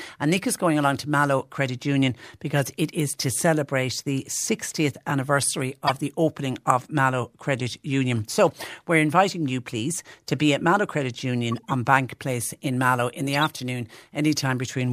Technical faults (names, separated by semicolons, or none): corrupt frame decoded